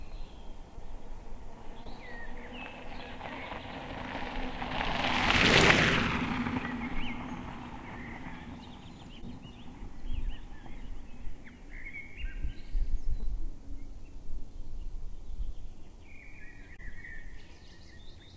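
Short concealed packet loss occurred at 0.76–0.80 s, 1.84–1.87 s, 9.21–9.24 s, 13.20–13.25 s and 16.77–16.80 s. Each time about 20 ms of audio arrived too late, and the receiver extrapolated the preceding sound before blending back, leaving a brief smear or wobble over the G.722 call path's 8 kHz-limited sound.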